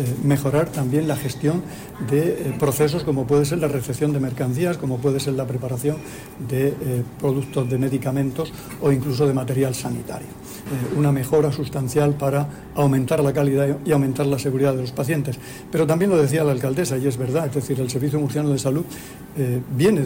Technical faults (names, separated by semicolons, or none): hard clipping